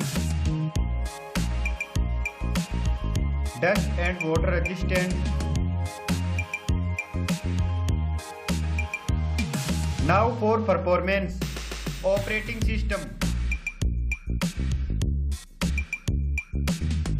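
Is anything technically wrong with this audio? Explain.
Yes. Compressed frames are skipped at 5.98 s, 11.30 s, 15.69–15.71 s and 16.80 s. Missing or rejected frames make the audio jump ahead about 70 ms, or about 150 ms at 15.7 s, which fits a few 23.2 ms frames. On a waveform the envelope changes abruptly there, and a spectrogram shows a sudden break in its patterns.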